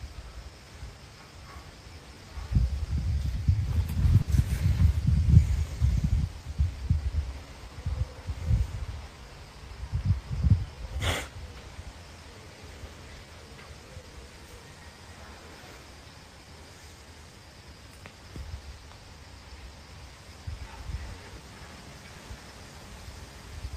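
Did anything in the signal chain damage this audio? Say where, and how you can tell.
Yes. Clock drift between sender and receiver shows up at the network and jitter-buffer stage. The whole clip has a faintly dragging, uneven pace, because the sender's clock runs roughly 4% slower than the receiver's. The buffer keeps draining, so the receiver must keep compensating.

Repeated timing corrections run from 0.10 s to 23.70 s. The receiver keeps repeating short pieces, always in the same direction, so playback runs at 96% speed and stretches by about a second overall.

A short stall from a late packet occurs at 4.22 to 4.31 s. One sound is held unnaturally long. The buffer ran empty, so the receiver stretched the last sound to fill 60 ms until the packet arrived, then resumed with nothing missing.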